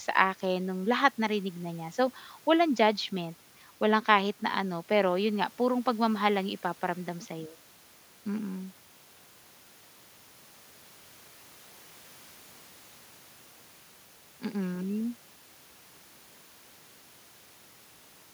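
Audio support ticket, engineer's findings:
No faults found; room noise about 32 dB below speech.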